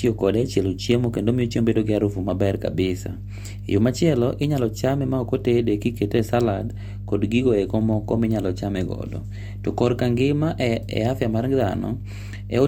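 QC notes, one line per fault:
Throughout, mains hum: a steady low tone at 50 Hz runs under the speech from start to finish. It sits at roughly 10 dB below the speech, so it stays audible in every pause and beneath every phrase. The tone comes from the power line leaking into the signal path. A ground loop or a nearby transformer couples that 50 Hz supply into the audio, which is why the pitch never drifts.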